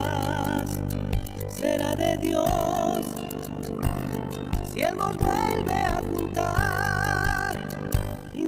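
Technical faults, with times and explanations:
Throughout: overlap-add ripple. The level swings by about 60 dB around 50 times a second, heard as a fast, rough flutter. The audio was split into windowed frames and rejoined with an overlap whose gains do not sum to a constant, so loudness dips once per frame.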